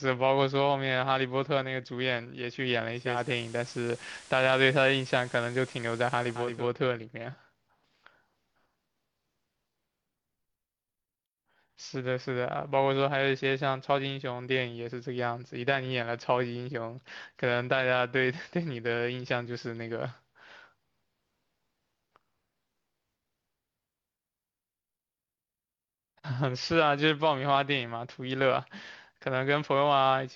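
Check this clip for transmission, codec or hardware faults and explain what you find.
One fault is present.

Digital radio blending to analogue, 2.89 to 6.71 s: the receiver lost its digital signal, cross-faded over 488 ms to the station's FM broadcast, and later returned. During that stretch the speech level shifts by about 2 dB, and FM hiss sits roughly 25 dB below it.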